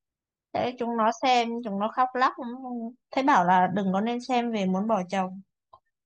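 No technical faults are audible.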